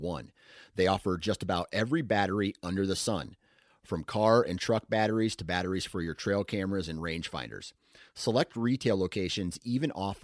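No technical faults can be heard anywhere in the recording; the speech signal stays continuous and stable throughout.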